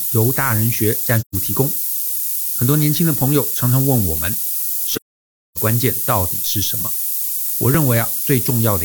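Right from the start, the speech sits under a thin, steady hiss that climbs sharply toward the top of the band. That's low bit depth with noise shaping, which fits roughly a 4-bit signal, with the rounding error pushed upward until it's about as loud as the speech.

At 1.18 s there's an AAC frame loss with muting. The decoder zeroed the missing spectrum, so the sound fades out and back in by 1.35 s, leaving a soft-edged gap, consistent with about three lost frames. A much longer hole of the same kind runs from 4.94 s to 5.58 s, roughly 0.6 s of silence that points to around fourteen frames gone.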